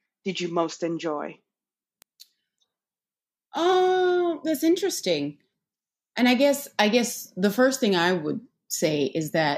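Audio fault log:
2.02 s, 3.57 s and 7.64 s: bit error spike. A flipped bit in memory or on a digital link throws one sample (two at 3.57 s) off by a power of two before the value snaps back. Each gives a single broadband tick, unrelated to the speech, peaking at about -19, -25 and -31 dBFS. The last falls between "guess I guess the" and "thing I would".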